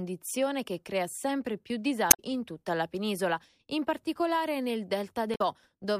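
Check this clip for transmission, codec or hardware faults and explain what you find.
Two faults, both damaged data in a compressed stream. At 2.08 to 2.20 s, after "che crea sempre più", and again at 5.32 to 5.41 s, the decoder hits corrupted frames, loses sync and hunts for the next header, giving a brief glitch in the speech.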